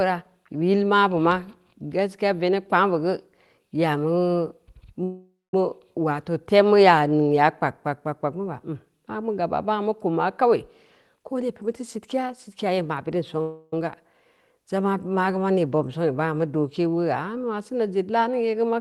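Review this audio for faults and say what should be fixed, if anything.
At 5.03 to 5.54 s and 13.41 to 13.73 s the speech stalls into a fading buzz, the first ending in about 200 ms of silence, then resumes where it left off. These are call audio freezes, likely from delayed packets draining the jitter buffer, which stretched the audio by about 0.5 s and 0.31 s without losing any. A larger adaptive jitter buffer or a steadier network path would prevent these stalls.

From 11.14 to 13.36 s the speech sounds hurried but keeps its pitch. This is a jitter buffer speed-up: the receiver played at about 117% speed, trimming pitch-period slices, roughly 0.4 s in total, to work off excess buffered delay. Smoother packet delivery or gentler buffer-shrink settings would avoid this rushed stretch.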